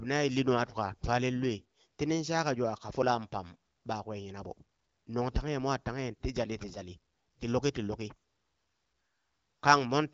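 Nothing to worry about in this speech recording: it's just coming over an AMR wideband (HD Voice) link, with the top end stopping at around 7.6 kHz and a light, steady texture that fits that codec running at roughly 15.85 kbit/s.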